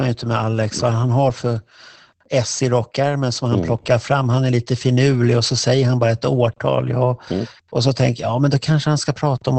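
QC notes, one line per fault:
throughout, Opus voice compression: the speech sounds muffled, hoarse and faintly robotic, with nothing above about 8.7 kHz. The wideband linear-prediction coder has trimmed the top band and coded the excitation coarsely, which fits a low bitrate around 12 kbps.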